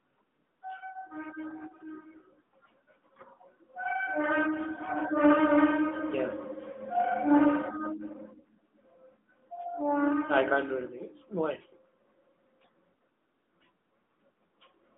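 Throughout, the speech carries AMR narrowband mobile codec damage. Nothing passes above 3.8 kHz, so a spectrogram shows a hard ceiling with the energy confined to roughly 200 Hz to 3.5 kHz. The pulse-driven vocal-tract model adds a plainly audible buzzy, synthetic edge that fits a rate near 10.2 kbps.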